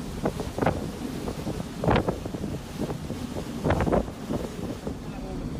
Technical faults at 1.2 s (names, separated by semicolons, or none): none